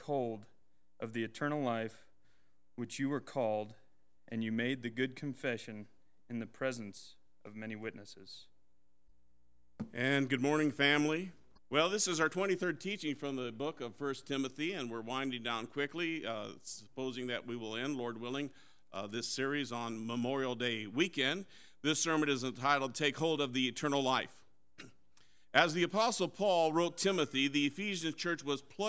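No technical faults can be heard in this recording.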